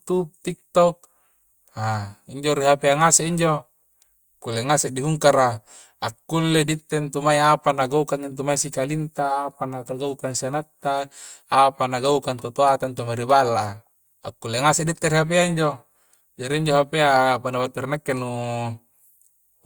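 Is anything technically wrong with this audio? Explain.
No, nothing is technically wrong with this audio.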